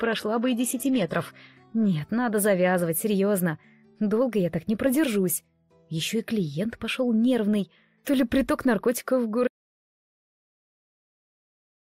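For the first 2.0 s the audio shows an adaptive stream starting at a low bitrate: the treble sounds thin and partly synthetic, with heavier codec smearing, which fits a low-rate HE-AAC stream near 16 kbit/s, with nothing above about 12.3 kHz. At 2.0 s it switches cleanly, with no gap, to a fuller AAC-LC 96 kbit/s version.

At 9.48 s an audio dropout to silence begins and lasts to the end. The signal cuts off abruptly into silence with no room tone, most likely because the input was lost while the encoder kept writing silence.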